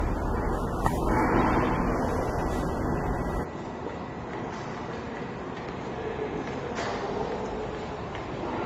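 From the start, the sound carries two overlapping sets of coding artefacts, heard together, with nothing above 15.7 kHz. This points to transcoding between lossy codecs, likely a low-rate AAC stage followed by Opus at a similar rate. The second encoder spends its limited bits reproducing the first one's artefacts, so both sets of damage stack, and the lowest bandwidth in the chain remains.

At 3.44 s the character changes abruptly, with no gap, and stays that way to the end. The top end now stops at 7.6 kHz, so the sound turns dull and boxy. The level drops by roughly 10 dB, and a faint new background noise appears far below the signal. This is an input switched to a poorer device, likely a fallback to a narrower-band microphone or a headset's call profile, with its own tone and noise.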